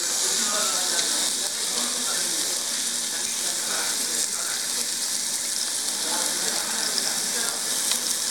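Nothing technically wrong turns up in this recording of sounds; I listened closely and there's no fault to point to anywhere in it.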